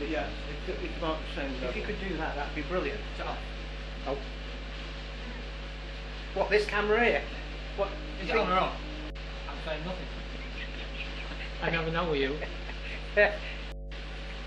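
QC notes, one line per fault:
Throughout, mains hum: a steady, loud 50 Hz drone with low harmonics, only a few dB below the audio, from power-line coupling through a ground loop or nearby transformer.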